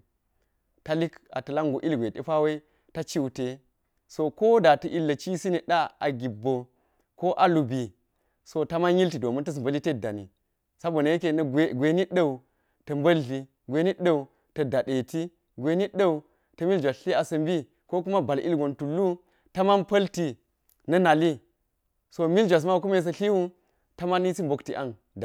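No technical faults can be heard anywhere in the recording, and the signal stays steady and intact throughout.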